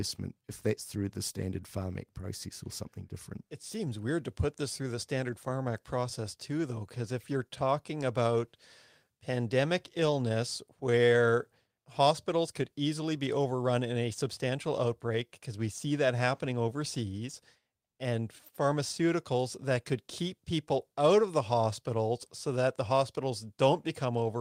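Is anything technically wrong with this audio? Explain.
Yes. Throughout the speech, slight hiccups and an unsteady pace point to clock drift between sender and receiver: the sender's clock runs about 2% slow, so the receiver's buffer keeps draining.

From 0.38 to 24.06 s, small unevenly spaced hiccups are repeated timing corrections. The receiver repeats short pieces to keep pace, playing at 98% speed and adding about half a second overall.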